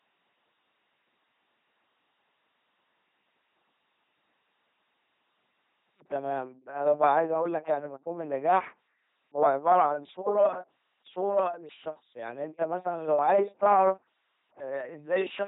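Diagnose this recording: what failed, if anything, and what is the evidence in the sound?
Codec stage: the speech throughout is the buzzing, robotic LPC-10 vocoder sound, consistent with 2.4 kbit/s. On a spectrogram it shows rigid pulse-train harmonics or flat noise, and nothing above 3.8 kHz.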